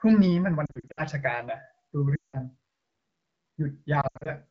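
A wideband speech recording, coded with AMR-WB at light codec damage consistent with the 12.65 kbit/s mode, has three bursts of lost AMR speech frames. Between 0.65 and 1.02 s, about 200 ms of audio is missing in scattered gaps, the longest 60 ms. From 2.15 to 2.38 s, 180 ms drops out. Between 4.01 and 4.30 s, 160 ms is lost, with one run of 80 ms. In longer runs the decoder repeats the last good pitch and vocal tract parameters at falling gain, so the speech quickly drops to near silence within two frames before recovering weak or rough.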